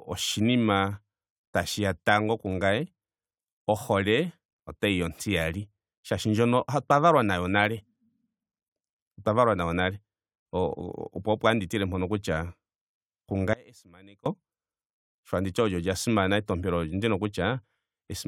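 It's a speech clip with an audio dropout to a faint residue from 13.53 to 14.26 s: the speech abruptly collapses for about 0.72 s, leaving only a faint leak roughly 25 dB down, then snaps back, likely a brief signal loss upstream while the path stayed live.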